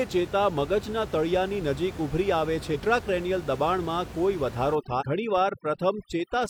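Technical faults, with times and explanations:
2.71–2.77 s and 4.97–5.03 s, damaged data in a compressed stream: two short bursts, about 56 ms and 62 ms long, break through as a brief glitch. Part of the compressed stream at each point is corrupt, so the decoder misreads or discards those frames and loses sync, then resumes at the next valid frame header. The garbled frames come out as brief non-speech artefacts in place of the intended signal.
4.75–6.49 s, overdone noise removal: over the last 1.7 s or so, the room noise, which sits about 15 dB below the speech, is suppressed too hard. The processor pushes individual frequency bands toward silence whenever they come close to its noise estimate, leaving isolated twinkling specks in the gaps. Low-level parts of the speech fall under that threshold as well and are stripped out.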